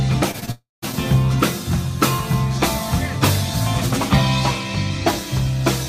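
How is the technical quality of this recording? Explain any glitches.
The recording is damaged near its start, where a burst of lost audio data runs into a longer outage within about half a second.

Short concealed packet loss occurs at 0.31–0.36 s, 0.40–0.43 s and 0.46–0.49 s. Each time, roughly 20 ms of audio failed to reach the decoder in time, and the receiver covered the gap by extending the preceding sound before easing back into the real signal. Each patch lasts only a few hundredths of a second, heard as a quick smear or wobble.

From 0.51 to 0.84 s the audio stops arriving for about a third of a second, most likely a long network dropout. The receiver keeps the last sound going as a fading buzz or hiss, then about 0.18 s of near-silence follows. When the audio resumes at 0.84 s, the roughly 0.32 s that never arrived is simply missing, so the sound jumps forward.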